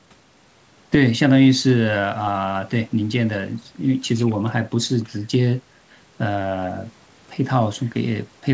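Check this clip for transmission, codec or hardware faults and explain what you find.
Nothing here points to a transmission, codec or hardware fault; the speech simply sounds like a normal call, with the top end stopping around 8 kHz the way a wideband call codec such as G.722 would leave it.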